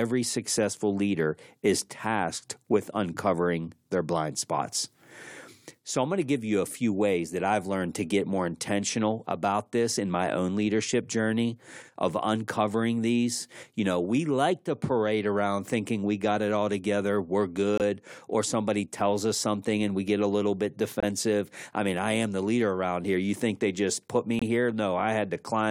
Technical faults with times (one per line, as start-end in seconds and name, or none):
17.78-17.82 corrupt frame muted
21.00-21.04 corrupt frame muted
24.39-24.43 corrupt frame muted